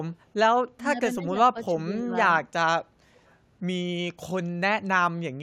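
Speech suppressed in double talk hits this speech clip at 0.75 to 0.83 s, 1.17 to 1.35 s and 1.53 to 2.12 s, with the voice dipping by roughly 15, 10 and then only about 5 dB. The likely cause is an echo canceller that could not separate the talker from loudspeaker echo while both sides spoke, so it pulled everything down. Echo leak follows at 3.16 to 3.32 s. A very faint copy of the voice, about 40 dB below it, arrives 332 ms late, likely because the echo canceller let some loudspeaker pickup through.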